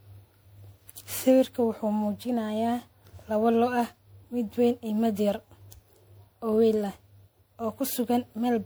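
Generation loss runs through the whole clip: the speech sounds swirly, smeared and hollow, with blurred attacks, beyond what one MP3 pass near 128 kbit/s would leave. The likely cause is about seven re-encodes, each requantising on a shifted frame grid, compounding noise and spectral holes.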